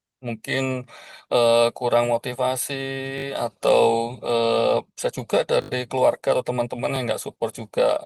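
At 3.18–3.24 s, 5.62–5.70 s and 6.96–6.98 s, new speech arrived late, so a repeated buffer stutters: one slice, fitting a 20 ms buffer, replays three, four and one extra times with hard joins. Unlike a dropout, nothing goes silent.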